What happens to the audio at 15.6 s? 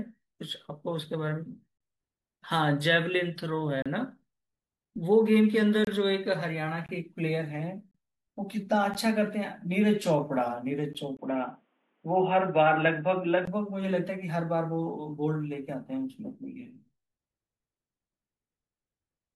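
At 15.6 s the speech carries on cleanly, with no dropout, click, distortion or other fault at that point.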